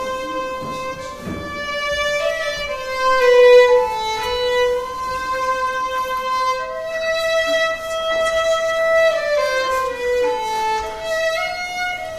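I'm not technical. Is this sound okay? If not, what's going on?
Yes, nothing in this recording points to a technical problem, so what you're hearing is the sound as it was captured.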